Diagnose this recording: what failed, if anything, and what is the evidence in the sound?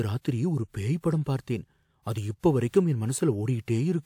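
The codec stage failed, producing pre-echo. Short hiss smears in ahead of sharp speech onsets at 1.42–1.47 s (56 ms), 2.40–2.43 s (39 ms) and 2.69–2.74 s (44 ms). The quantisation noise for each transform block, sized for the attack, spills into the quiet lead-in.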